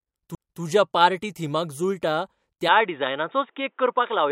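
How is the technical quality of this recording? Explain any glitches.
The recording has two faults: an early skip and a later loss of high frequencies.

At 0.35 to 0.38 s, just before "पार्टी थिमाक जुळटा", there is a CD skip. The laser jumps to another turn of the spiral, so playback mutes for a few tens of milliseconds and resumes elsewhere. This is heard as a tick and a jolt in the speech, and the waveform shows a brief flat gap with mismatched edges.

From 2.68 s to the end, right after "पार्टी थिमाक जुळटा", the speech turns dull and boxy with no gap or level change. This is likely an input switched to a poorer device. Nothing remains above 3.8 kHz, so a spectrogram shows a sharp ceiling there, with a faint new noise floor far below the speech.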